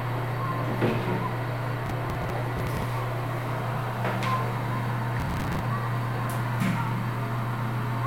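Gritty, tearing crackle rides over this recording of sounds from 1.86 to 2.83 s and again from 5.2 to 5.6 s. It is processor overload crackle: buffers of around 10 ms miss their deadlines, roughly twenty times in each stretch, and each is filled with hard-edged repeats of stale audio.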